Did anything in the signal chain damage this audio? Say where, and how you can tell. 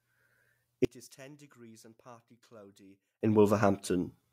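Yes. From 0.85 to 3.21 s the speech drops by about 29 dB and turns faint. This is likely one channel inverted, a polarity flip in the analogue wiring: when the channels sum to mono, the shared centre content cancels and only the faint difference remains.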